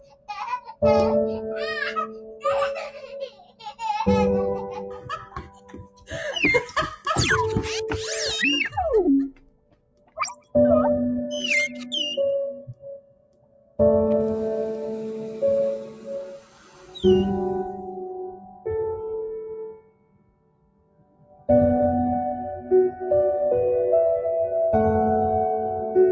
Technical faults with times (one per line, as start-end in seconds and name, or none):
0.00-26.11 noise suppressor applied to music or sounds
0.00-0.83 sound cut by the noise suppressor
2.06-3.81 sound cut by the noise suppressor
4.88-7.06 sound cut by the noise suppressor
9.31-10.55 sound cut by the noise suppressor
12.56-13.80 sound cut by the noise suppressor
18.33-18.66 sound cut by the noise suppressor
19.71-21.49 sound cut by the noise suppressor